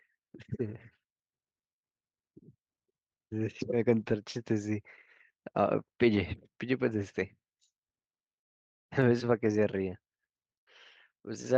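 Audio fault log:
0.61–0.75 s, 4.01–4.11 s, 6.15 s, 6.97–7.03 s, 9.43–9.45 s: lost packet rebuilt from error correction. Packets went missing, but each following packet carried a low-bitrate backup copy that the decoder played in their place, so the sound never drops out. The patched stretches run about 80, 60, 20, 40 and 20 ms, which fits runs of four, three, one, two and one 20 ms packets. In each, the speech turns briefly rougher and noisier.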